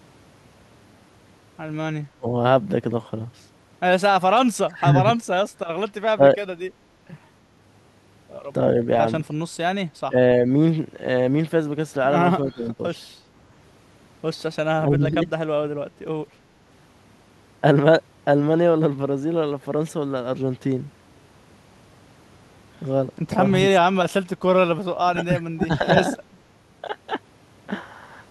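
Speech suppressed in double talk at 2.15, 4.62, 6.15, 10.06, 12.45, 14.74 and 25.05 s: the speech ducks by roughly 15 to 25 dB, likely an echo canceller muting overlapping talk, showing as waveform notches and spectrogram gaps.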